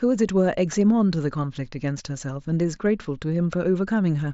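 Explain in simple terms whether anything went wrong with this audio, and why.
Nothing went wrong here.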